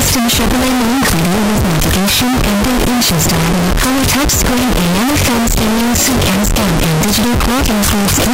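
From start to finish the audio is a wall of very loud, harsh distortion, with quiet stretches blaring as hard as everything else. This is likely signed and unsigned mixed up: 16-bit samples read with the wrong sign convention, so every zero crossing leaps across the full range.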